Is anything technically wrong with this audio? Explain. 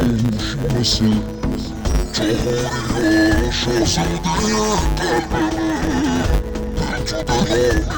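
Yes. Throughout, interleaved audio is read as planar: in each 10 ms block, alternating left-right samples are split into halves, each played at half speed. The sound is dull and robotic with a 100 Hz buzz, unlike a plain pitch shift, because there is no clear octave drop.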